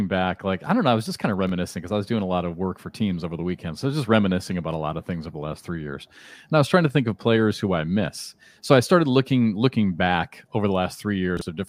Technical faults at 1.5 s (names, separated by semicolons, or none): chunks out of order